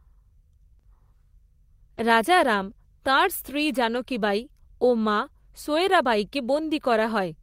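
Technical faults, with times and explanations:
0.73 to 0.81 s, burst of packet loss: About 60 ms of the speech stream never arrived, so the receiver stretched the last sound across the hole and let it fade, leaving a held buzz or dying hiss. The speech then picks up further on with that stretch gone. This is longer and more obviously a dropout than the brief smears nearby, and real content is missing rather than merely blurred.
0.81 to 0.85 s and 1.95 to 1.99 s, short concealed packet loss: Two 20 ms holes, each about the length of one frame, were filled by extrapolating the preceding sound, voiced parts from their pitch and noisy parts as shaped noise, then blended back into the real signal. The first directly trails the burst. The second falls just before "রাজারাম তাঁর স্ত্রী". Each is heard as a quick smear or wobble rather than a gap, far shorter than a burst.
1.97 to 1.99 s and 3.93 to 3.99 s, lost packet rebuilt from error correction: Here the missing audio was replaced from a low-bitrate copy carried in the following packet (Opus in-band forward error correction), so nothing drops out. 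Instead there is a brief patch of rougher, noisier sound, about 20 ms just before "রাজারাম তাঁর স্ত্রী", and about 40 ms between "রাজারাম তাঁর স্ত্রী" and "বাঈ ও মা সোয়রাবাঈকে", from two lost packets. Unlike concealment, the actual content survives at lower quality instead of being guessed.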